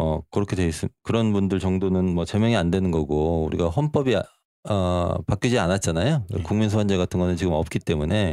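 Nothing here needs fixing: it's a short speech recording, and there's no technical fault anywhere in it.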